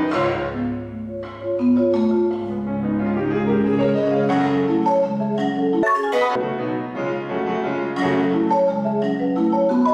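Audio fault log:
5.83–6.36 s, audio read two samples at a time (double speed): the reader consumed paired samples as single frames, so this half-second plays twice as fast and an octave higher.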